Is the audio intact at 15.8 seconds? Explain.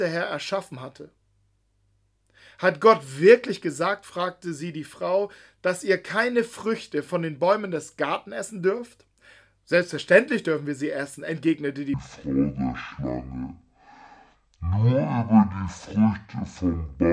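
No, 15.8 s falls inside a wrong sample rate stretch from 11.94 s, right after "wir sie essen entgegnete", to the end. It plays at half speed and a full octave low, consistent with 44.1 kHz audio played at about 22 kHz.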